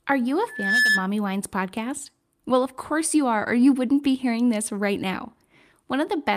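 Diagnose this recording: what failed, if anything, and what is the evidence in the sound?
A loudspeaker feedback squeal hits the analogue acoustic path from 0.48 to 1.08 s. A single 1.7 kHz tone swells over roughly a third of a second to about 5 dB above the speech. The microphone is re-amplifying its own loudspeaker, with loop gain above one at that frequency.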